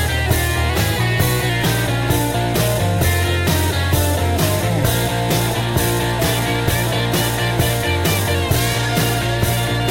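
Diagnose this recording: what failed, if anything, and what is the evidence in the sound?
The buffer stage likely made a drift correction step: clock-matching software trying to refill or drain its buffer changed the playback rate in one jump instead of easing it. From 0.69 s to 1.49 s the sound runs about 5.4% fast and its pitch rises by roughly 91 cents, close to a semitone, as speed and pitch move together. At 1.49 s both snap back to the original rate, so the passage sounds briefly detuned and hurried.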